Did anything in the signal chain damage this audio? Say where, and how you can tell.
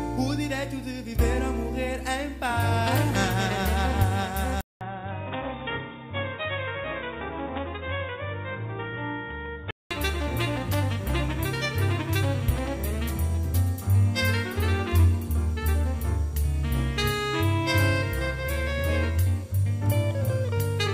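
Yes. From 4.61 to 9.91 s the sound turns boxy and nothing reaches above 3.8 kHz, after a 200 ms gap. It comes back a few dB quieter over a new, faint noise floor, which points at the input stage, likely an input switched to a poorer device rather than a codec bandwidth drop.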